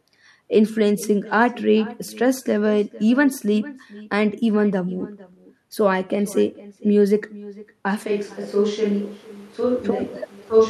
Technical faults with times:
0.00-10.70 echo with no canceller
8.08-10.70 switch to a distant microphone

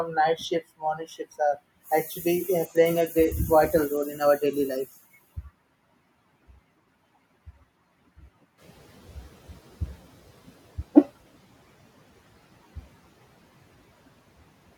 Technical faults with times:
8.57-10.52 noise suppressor catching up

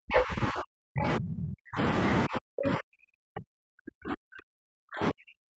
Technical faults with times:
0.00-1.80 speech suppressed in double talk
0.13-0.21 other side's voice leaking through
2.27-5.58 speech suppressed in double talk

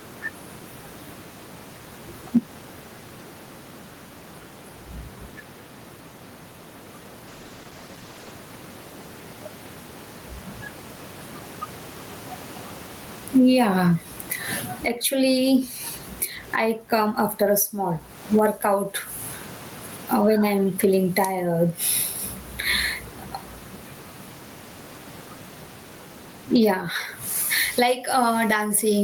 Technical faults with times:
0.00-29.04 gain pumping
7.29-8.41 call bitrate drop

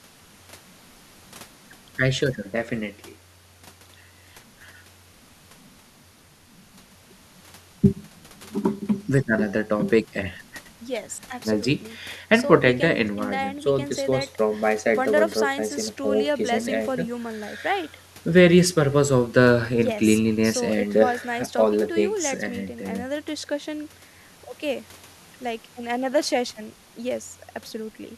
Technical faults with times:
none

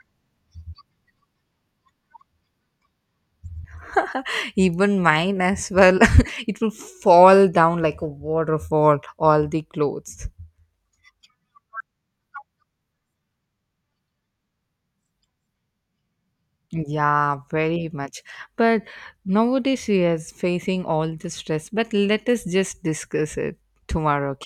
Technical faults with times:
none

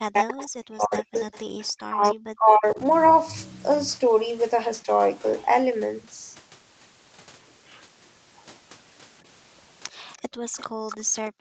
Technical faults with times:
0.00-2.80 speech suppressed in double talk
0.38-2.12 echo leak
4.84-4.88 speech suppressed in double talk
9.90-11.41 background gated by the echo canceller
10.48-11.41 echo leak

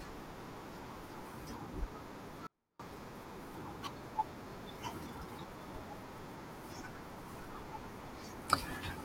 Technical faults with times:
2.47-2.79 audio dropout to a faint residue

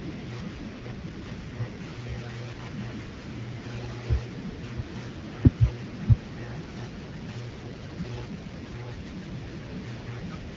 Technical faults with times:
0.73-2.60 AMR rate drop
7.05-9.32 AMR rate drop

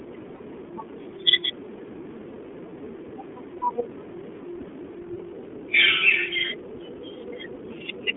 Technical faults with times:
0.00-8.17 iLBC codec
0.36-0.43 lost iLBC frames
3.58-3.62 lost iLBC frames

